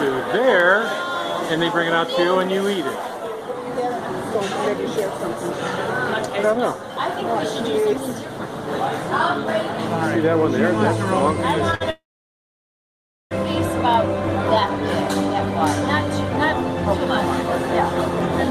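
At 11.75 to 11.82 s, a short stall from a late packet holds the last sound for about 58 ms while the jitter buffer waits. Nothing is lost, and the spectrogram shows a brief smeared, flat-lined patch. From 11.90 to 13.33 s, a call audio freeze inserts roughly 1.4 s. A brief fading buzz drops into about 1.3 s of silence, a flat line on the waveform, before the audio resumes intact. It was likely caused by delayed packets emptying the jitter buffer.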